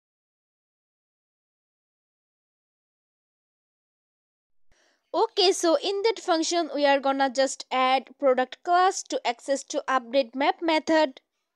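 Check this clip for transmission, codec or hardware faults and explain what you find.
Nothing in the signal points to a transmission, codec or hardware problem; the audio stays continuous and stable throughout, with no audible disruption or damage.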